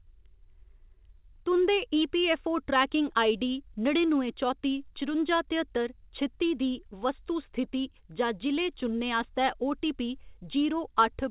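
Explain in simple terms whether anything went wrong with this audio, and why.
Nothing went wrong here.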